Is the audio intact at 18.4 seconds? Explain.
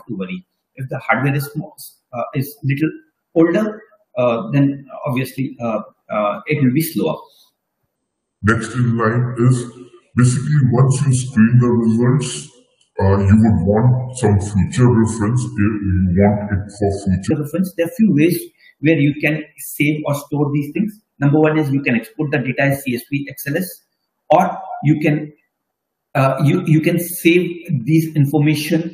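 Yes, the audio at 18.4 seconds is intact, with no dropout, click, distortion or other fault audible at that moment.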